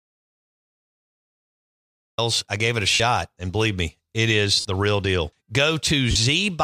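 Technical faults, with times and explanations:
0.00–2.18 s, audio dropout to silence: The clip opens in a dead gap that is already under way. It is silent, with no room tone or hiss at all. The sound resumes abruptly at "I gave it". Silence this empty means the recorder kept writing silence while its input was missing. The likely cause is a disconnected device, a broken link or a mute. Whatever came before 2.18 s is lost.
2.94–3.00 s, 4.60–4.65 s and 6.11–6.16 s, lost LE Audio frames: Three short holes break the speech. The first lasts 60 ms and the other two 45 ms each. The second falls between "believe me it is" and "the real deal". In each hole the voice turns into a brief noisy smear instead of going silent. The decoder is replaying the last spectrum with scrambled signs and fading it. The gap lengths fit runs of 7.5 ms LC3 frames, likely over a 64 kbps link.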